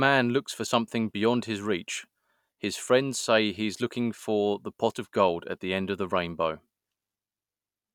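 Nothing in this speech recording stood out as a technical problem on listening.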